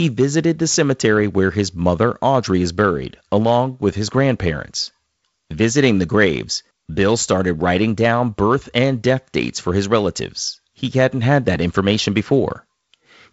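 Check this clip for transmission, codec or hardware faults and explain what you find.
No faults found; this wideband phone speech sounds as expected.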